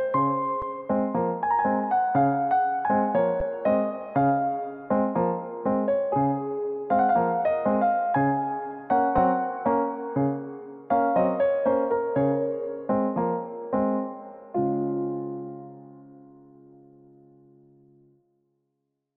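At 0.62, 3.40 and 9.18 s there is an underrun with held sample. The output buffer ran dry. The converter froze on its last value for about 5, 10 and 2.6 ms. The sound flattens into brief silence, then resumes where it stopped, softly.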